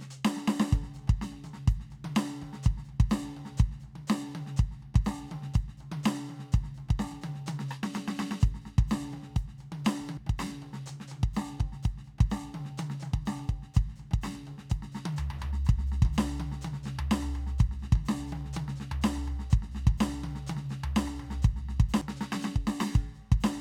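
At 10.17 s and again at 22.01 s the music hits a CD skip. The laser jumps to another track turn, muting for a few milliseconds before playback resumes elsewhere. Each is a tick and an abrupt jump, showing as a thin broadband stripe and a waveform break.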